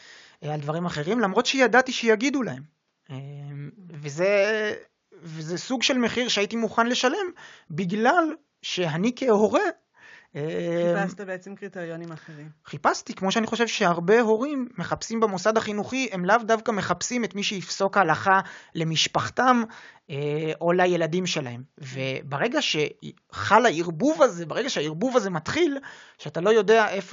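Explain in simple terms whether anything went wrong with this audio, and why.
At 8.29 s the speech jumps ahead about 20 ms. This is compressed frames skipped: one missing or damaged chunk of coded audio was never played.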